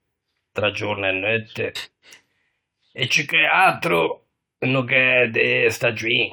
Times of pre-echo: none

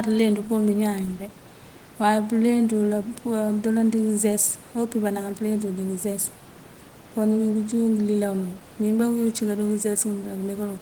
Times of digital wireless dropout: none

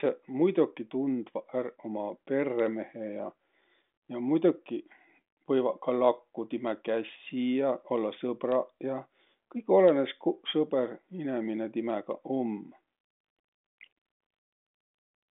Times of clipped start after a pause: none

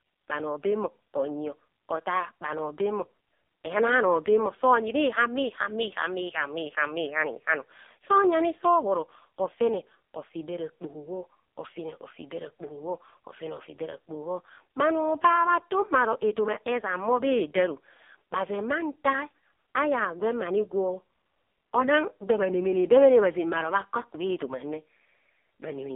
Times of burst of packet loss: none

